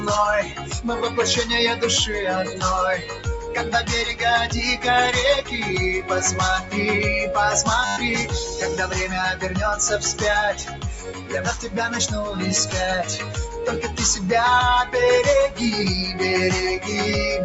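A speech-tuned noise suppressor runs across the whole clip, treating sustained tones and decaying tails as noise. Level swings by around 10 dB, so the sound pumps and thins. On a waveform the envelope breathes unevenly, and on a spectrogram held partials fade in patches below the 8 kHz ceiling of the call path.

The suppressor cuts sound hardest at 0.43 to 0.79 s (about 8 dB), 2.98 to 3.53 s (about 10 dB), 10.55 to 11.4 s (about 11 dB), 11.56 to 11.96 s (about 8 dB), 13.18 to 13.38 s (about 8 dB) and 13.85 to 14.0 s (about 6 dB). Each is a sag in the waveform where sustain collapses while onsets survive, with darkened bands on the spectrogram.

From 7.85 to 7.97 s a system hang loop repeats one 10 ms slice 12 times, which fits a 10 ms ring buffer. It is heard as a brief 100 Hz buzz. The waveform shows an identical repeating cell, and the spectrogram shows evenly spaced harmonic lines at 100 Hz intervals.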